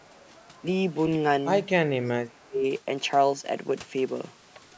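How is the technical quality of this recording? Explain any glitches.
The recording has two call-processing faults in its first three seconds.

Echo leak at 0.0–0.24 s and again at 0.43–0.47 s: a very faint copy of the far-end speech, about 35–40 dB down, trails by 291 ms. This is likely a loudspeaker echo the canceller failed to remove.

Speech suppressed in double talk: a slight dip of about 5 dB at 0.5–0.63 s, then a deep cut of about 35 dB for nearly 0.7 s between 1.9 and 2.65 s. The canceller likely attenuated both talkers during overlap.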